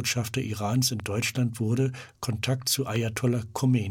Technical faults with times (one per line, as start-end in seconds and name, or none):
1.00-1.02 loud pop
2.96-3.19 loud pop